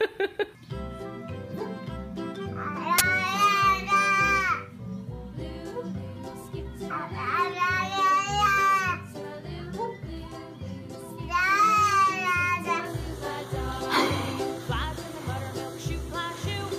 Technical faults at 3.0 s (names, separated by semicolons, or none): uninitialised buffer